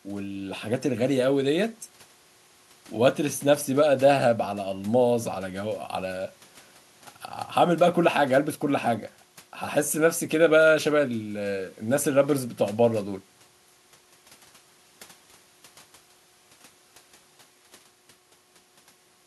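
No dropouts, glitches, level jumps or other transport faults are audible anywhere in this speech recording.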